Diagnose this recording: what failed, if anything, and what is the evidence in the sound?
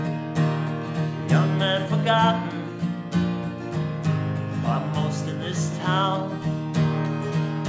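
Nothing in the recording stood out as a failure on listening, and there is no audible evidence pointing to a problem at any stage of the chain.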